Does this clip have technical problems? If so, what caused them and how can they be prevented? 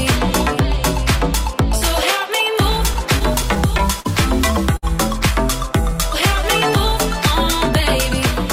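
Yes. Between 2.77 and 4.07 s there are scattered short gaps: about seven small holes where packets were lost or arrived too late. The receiver concealed each one by extending the preceding sound, about 100 ms of fill in total. The longest single patch is around 40 ms, covering roughly 7% of that stretch. The result is brief ticks, smears and hiccups on otherwise continuous audio. Preventing this means reducing loss on the network path, for example with QoS prioritisation, or adding forward error correction so lost packets can be rebuilt.

From 4.77 to 4.85 s there is a short stall from a late packet. A 60 ms jump in network delay left the jitter buffer empty, so the receiver held the last sound for 60 ms until the packet arrived. It then resumed from the same point, so nothing is lost, but one moment is audibly drawn out with a faint buzz or dip. An adaptive jitter buffer with enough headroom to absorb delay swings of this size would prevent the stall.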